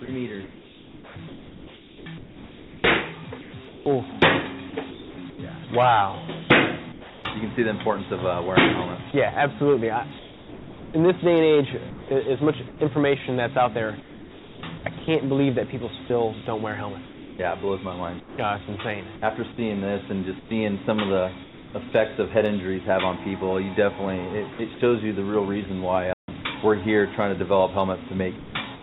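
From 0.05 to 5.39 s the sound is choppy. Quiet stretches and edges keep giving way to a flat hiss, and about 2.9 s in total is replaced. This is sound chopped by the voice detector, which likely kept switching transmission off and back on, leaving comfort noise in the gaps.

From 6.92 to 7.25 s the background turns smooth, featureless and about 3 dB quieter. This is comfort noise in place of the background: the sender likely stopped transmitting during the pause, and the receiver filled it with synthetic noise shaped roughly like the real background.

From 9.11 to 18.38 s the same choppy flicker returns, with about 2.4 s swapped for steady synthetic noise. Again, sound is chopped by the voice detector, likely as it toggled repeatedly between sending and pausing.

From 20.39 to 21.74 s there is another patch of bland, uniform background, about 0.42 s in total. This is comfort noise in place of the background, likely filling a gap where transmission paused.

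From 24.53 to 24.8 s a brief cut of about 0.12 s breaks the sound. This is a short case of sound chopped by the voice detector, likely caused by a momentary drop in transmission.

At 26.13 to 26.28 s the output goes dead silent for about 150 ms in mid-flow, then carries on. This is a playback stall, likely where the player ran short of data or its thread was blocked.

From 28.37 to 28.55 s roughly 110 ms of sound vanishes under steady noise. This is sound dropped by the voice detector, likely because it mistook a quiet passage for background. Throughout, nothing is heard above 4 kHz, which fits a narrowband G.711 call codec.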